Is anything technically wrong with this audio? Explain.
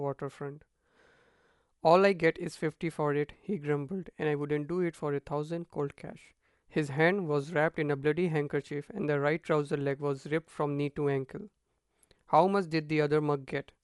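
Yes. Throughout the speech, the sound is dull and plainly damaged by coding. Nothing reaches above 11.5 kHz, and a rough, fluttering noise clings to the voiced parts. This is likely Dolby Digital compression at a starved bitrate, which fits roughly 64 kbps. At that rate the encoder narrows the band and leaves many frequency lines without mantissa bits. The decoder fills those lines with dither noise, which produces the grainy flutter.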